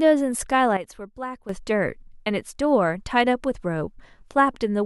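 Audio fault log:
0.77–1.49 s, sudden gain jump: the speech and its background noise drop together by about 11 dB in a single step, then return just as abruptly, likely from a digital gain change applied without a ramp; a fade or compressor would glide instead.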